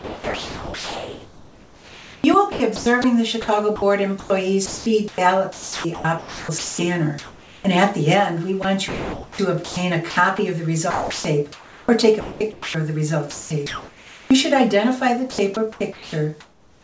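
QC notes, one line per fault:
0.00–7.64 s, 8.62–10.38 s, 10.90–12.74 s, 13.30–14.30 s, 15.30–16.83 s: sound chopped by the voice detector. The sender likely kept toggling transmission off and on, so synthetic comfort noise stands in for about 4.3 s, 0.72 s, 1.1 s, 0.84 s and 0.80 s of real sound in these stretches. The result is choppy. Through it all, nothing is heard above 8 kHz, which fits a wideband call codec.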